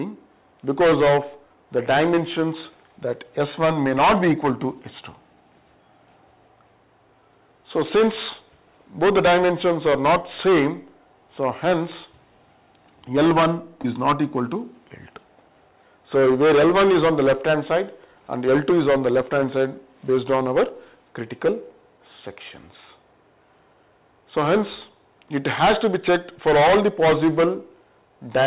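A brief smear interrupts the sound from 13.82 to 13.86 s. This is short concealed packet loss: about 20 ms of a call path band-limited to 4 kHz never arrived, and the receiver filled the gap by extending the preceding sound.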